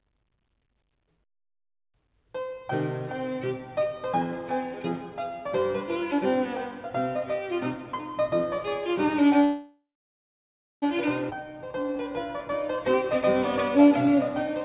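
At 9.44 s the audio stalls in a call audio freeze. The last sound is carried on briefly and fades. Then about 0.97 s of near silence follows. Playback resumes at 10.84 s, picking up where it stopped. About 1.38 s of gap has been inserted and nothing is lost. The likely cause is packets held up in transit, letting the jitter buffer run dry. The band stops at 4 kHz throughout, which points to a G.711 A-law call path at 64 kbps.

From 11.30 to 11.33 s there is a skip ahead. Roughly a second of audio is dropped. Only a sliver of filler, about 13 ms, bridges the jump. The two sides butt together almost directly. The audio was dropped either in transit or by the jitter buffer as it overflowed, while later audio was already waiting. The result is an abrupt jump forward in the flow.

Two jitter buffer slow-downs follow. The first runs from 11.36 to 13.04 s at 92% speed and adds about 140 ms. The second runs from 13.78 to 14.17 s at 89% speed and adds 49 ms. 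In both, the receiver repeats single pitch periods to rebuild its reserve. The pitch stays the same but the sound drags. Held sounds stretch out, with a faint warble at times.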